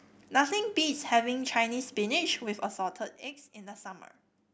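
From 2.4 to 3.36 s the speech carries zipper noise: a fade of roughly 15 dB is applied in unsmoothed 2 dB jumps, around ten per second, and each jump puts a small click into the waveform, giving a rapid ticking under the falling level.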